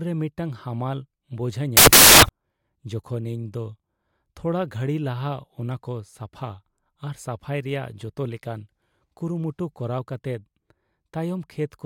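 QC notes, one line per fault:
1.77–2.29 s, samples built from the wrong bytes: for about half a second the speech gives way to a burst of loud, harsh broadband noise. Each sample's bytes are being assembled in the wrong order or alignment, so the rapidly changing low bits land in the most significant position and swamp the real signal.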